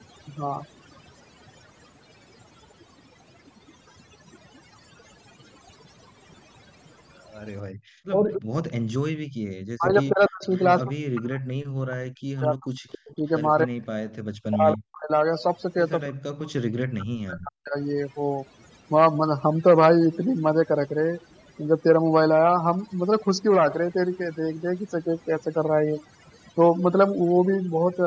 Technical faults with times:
0.00-28.07 overdone noise removal
7.15-8.40 echo leak
7.63-9.38 background gated by the echo canceller
8.36-17.75 speech suppressed in double talk
10.44-10.62 echo leak
12.92-14.77 echo leak

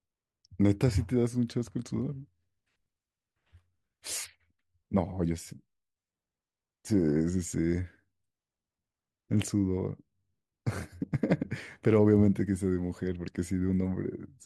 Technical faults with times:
none

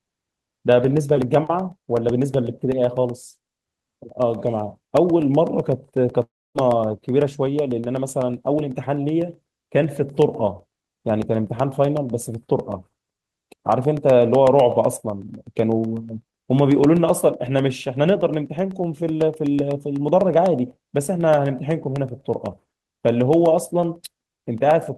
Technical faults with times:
0.09-24.98 periodic USB or driver dropouts
6.23-6.57 long network dropout

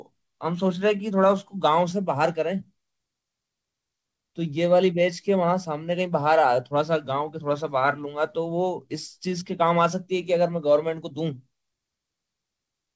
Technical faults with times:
0.00-12.95 clock drift between sender and receiver
0.11-12.87 repeated timing corrections

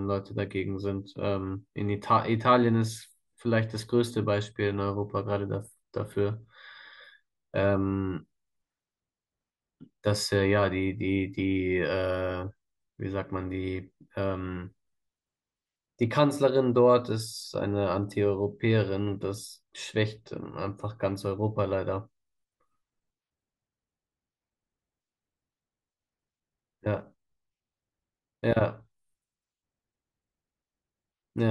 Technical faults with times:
16.03 dropped samples
18.03 dropped samples
19.38 dropped samples

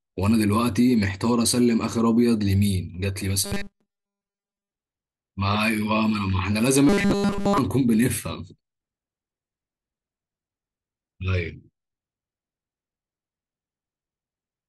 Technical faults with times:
3.44-4.71 robotic sound from repeated short buffers
6.89-7.58 robotic sound from repeated short buffers

